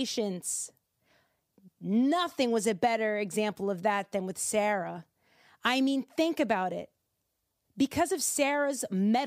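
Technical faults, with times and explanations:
No technical faults are audible in this speech recording.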